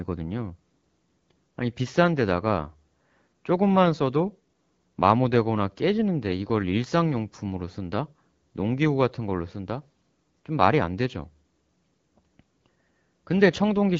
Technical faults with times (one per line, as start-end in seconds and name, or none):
none